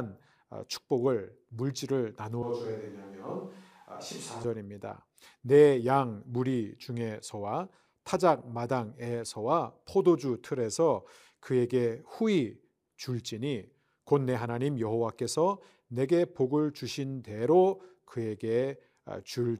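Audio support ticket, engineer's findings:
Switch to a distant microphone, 2.43–4.44 s: speech abruptly roomy, hollow, thin, about 5 dB quieter. Waveform steps down; spectrogram loses low end, noise floor rises. Likely close mic dropout.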